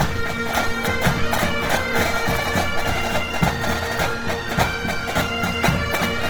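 Opus compression damage runs through the whole clip and is plainly audible. Tonal parts turn grainy, rough and noisy rather than swirly. The encoder likely ran in its CELT music mode at a low rate, near 16 kbps. Bandwidth stays full, reaching 20.2 kHz.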